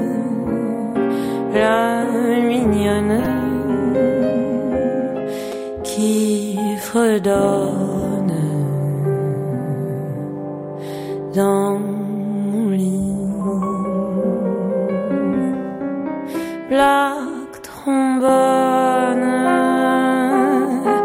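Brief repeated buffer faults occur at 3.25 s, 5.52 s and 18.29 s. Fresh audio reached the output too late, so the device replayed its last 5.8 ms block, which fits a 256-sample buffer. It replayed twice at the first two times and once at the last, with essentially nothing skipped. Each is heard as a tiny click or buzzy tick. On a waveform the identical segment sits side by side with abrupt joins; a spectrogram shows thin vertical broadband lines.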